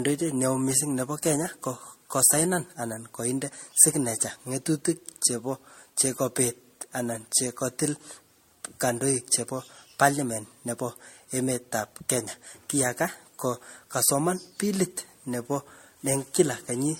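This speech recording was likely re-encoded about five times through a lossy MP3 chain, which fits a rate near 64 kbit/s. The result is generation loss throughout: swirly, smeared, hollow sound, blurred attacks, and nothing above 16.5 kHz.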